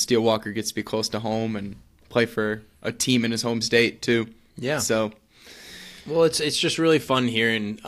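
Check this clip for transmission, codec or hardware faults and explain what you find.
Nothing stood out on listening to this speech recording.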